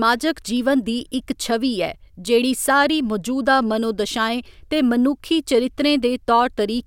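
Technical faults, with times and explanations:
No technical faults can be heard anywhere in the speech recording; the signal holds steady and continuous throughout.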